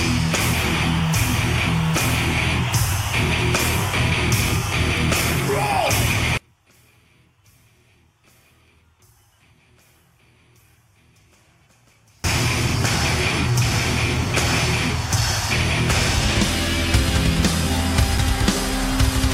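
One channel inverted, from 6.37 to 12.24 s: the sound drops by about 36 dB to a faint residue, likely because one stereo channel's polarity is reversed and cancels when summed to mono.

CD scratch ticks, from 17.21 to 18.66 s: seven regular ticks, each at most a few milliseconds long, where a disc blemish defeated error correction on each rotation.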